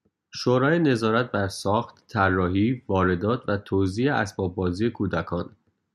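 Nothing here sounds broken; the speech runs along without any technical trouble to point out.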